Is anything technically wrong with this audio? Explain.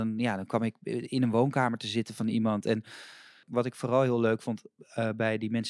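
No, nothing technically wrong can be heard in this speech recording. There is no fault to point to anywhere in it.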